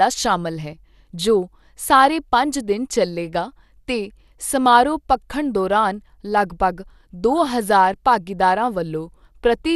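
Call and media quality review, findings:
Speech sounds dull and gurgly throughout, nothing above 12.2 kHz; likely MP2 compression, around 80 kbps, upper sub-bands dropped and the rest coarsely quantised, giving that granular flicker.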